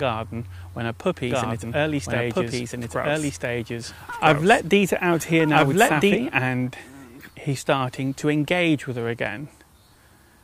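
From 1.31 s to 6.15 s the audio is doubled. A second, full-band copy trails the original by about one and a half seconds. It is roughly as loud as the original, so the two layers compete evenly. The copy carries no decay or room colour. It cuts in and drops out abruptly at the edges. This doubled audio track is likely caused by the sound being captured again through a slower path.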